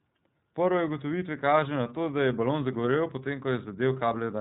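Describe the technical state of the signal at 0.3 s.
At 0.3 s the speech carries iLBC codec damage, as it does for the whole clip. Each short frame, consistent with 30 ms, is coded independently, so the speech sounds plainly rough and synthetic. Nothing passes above 3.9 kHz, as expected of this narrowband codec, here running near 13 kbps.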